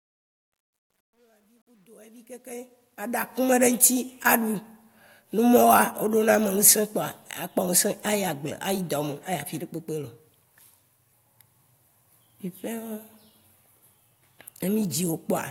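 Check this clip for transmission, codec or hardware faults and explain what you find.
One fault, in the fade-in. From 0.0 to 3.51 s there is truncation distortion on a fade. The fade stage drops low-order bits without dither, consistent with about 11-bit resolution. From 0.0 to 2.63 s the quietest stretch turns gritty. The fault ends at 3.51 s.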